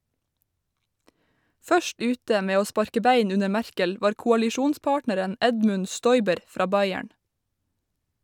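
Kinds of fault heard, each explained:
Nothing stood out on listening to this speech clip.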